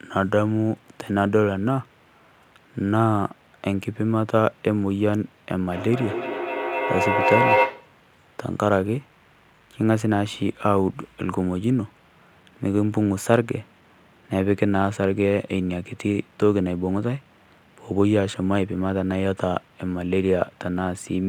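A faint hiss and graininess runs under the speech from start to finish, swelling on loud and bright syllables and disappearing in the pauses. This is sample clock jitter: the converter's timing wanders by something like a microsecond or two, so each sample lands slightly off its proper instant. Where the waveform changes fastest, that small timing slip becomes the largest level error, leaving a noise floor roughly 45 dB below the speech that tracks its loudness.

From 5.62 s to 8.0 s, each syllable comes back again and again at a steady spacing of roughly a fifth of a second, with a thin, ringing tone. The repeats build rather than fade, peaking about 2 dB above the speech itself. This is feedback echo between two devices: one device in the room plays the other's microphone feed, that microphone picks it up again, and neither echo canceller can remove sound its own device did not play.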